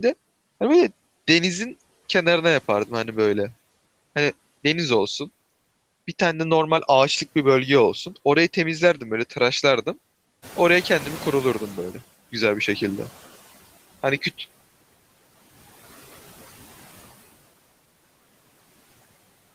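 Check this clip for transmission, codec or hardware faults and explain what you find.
One fault stands out in this speech clip: a noise suppressor catching up, from 10.42 s to 12.05 s. At about 10.5 s the room noise jumps by about 12 dB, and the suppressor's noise estimate still reflects the quieter level before it. For roughly 1.6 s the louder background therefore comes through with too little reduction, then sinks by about 13 dB as the estimate adapts. The room noise itself is part of the recording, not a system fault, and stays about 21 dB below the speech after the rise.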